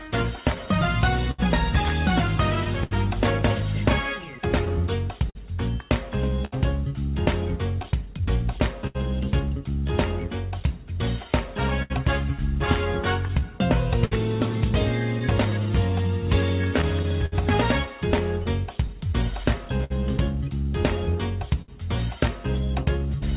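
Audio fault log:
Throughout: clock drift between sender and receiver. The sending clock runs roughly 5 percent slow against the receiver, so the jitter buffer keeps draining and the receiver must keep stretching what it has to stay fed. The result is a faintly unsteady pace that never settles. On a waveform no single event stands out; instead, envelope shapes land progressively later than a steady grid would predict. The narrow band, with nothing above 4 kHz, fits a G.711 A-law call path.
0.03–23.08 s: repeated timing corrections. Across nearly the whole clip the receiver inserts small stretches, running the audio at about 99 percent speed and adding something like 400 ms in total. Every correction goes the same way, lengthening rather than cutting, but they arrive at uneven spacing, so the tempo wobbles slightly instead of drifting smoothly. A spectrogram shows occasional frames where harmonic or noise patterns are briefly drawn out horizontally, with no matching compressions elsewhere.
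0.23–21.70 s: scattered short gaps. About thirty separate small holes, one here and one there, were patched by carrying the preceding sound forward, together filling roughly 700 ms, about 4 percent of this span. The longest patch is around 70 ms. Each is heard as a brief tick, smear or hiccup rather than silence. On a spectrogram these show as short, flat, frozen-looking slices. On the waveform they appear as repeated periods that end with a small discontinuity.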